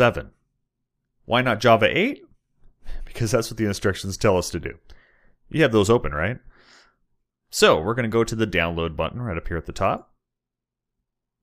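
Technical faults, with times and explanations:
No technical faults detected.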